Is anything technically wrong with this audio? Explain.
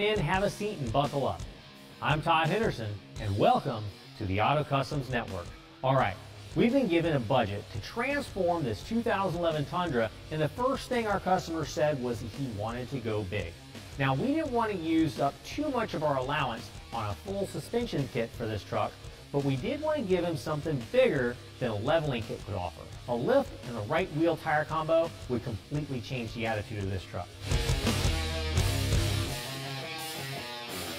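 Yes, there's a channel delay, which shows up as comb filtering across the whole clip. One channel arrives about 20 ms behind the other, and when the two get folded to mono, everything they share cancels at evenly spaced frequencies, with the first notch down around 20 Hz and the rest stacked closely above it. At a lag that long, the sound comes across as rough or slightly doubled rather than just dulled at the top.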